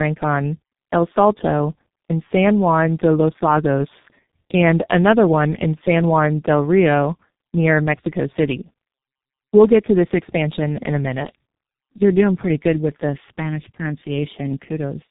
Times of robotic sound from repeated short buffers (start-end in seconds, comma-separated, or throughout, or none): none